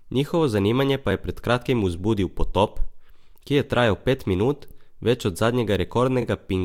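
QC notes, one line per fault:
3.30–3.32 s, 4.70–4.72 s, 6.21–6.23 s: repeated frames. A short chunk of the speech plays twice in a row, after "pred kratkim vzbudil potop" and before "ki je trajal pet", then after "je trajal pet minut" before "več od", then near the end. Each repeat adds roughly 23 to 26 ms, which fits one or two compressed frames being sent twice. Unlike an echo, the copy is identical and doesn't fade. Unlike a dropout, nothing is lost and no gap opens.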